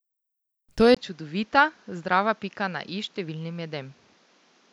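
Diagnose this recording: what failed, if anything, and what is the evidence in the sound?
At 0.95 s the speech cuts out for about 20 ms and comes back duller and boxier, roughly 10 dB quieter, with a new noise floor some 35 dB below the signal that lasts to the end. The likely cause is the input switched to a poorer device at the driver level. On a spectrogram, a brief vertical gap appears, and after it all energy stops at 7.6 kHz; the waveform steps down in amplitude.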